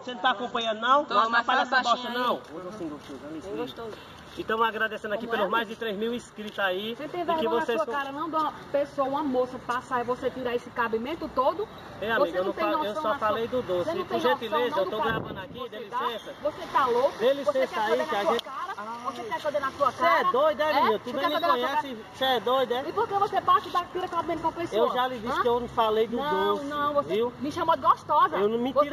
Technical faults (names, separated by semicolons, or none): imaging from linear upsampling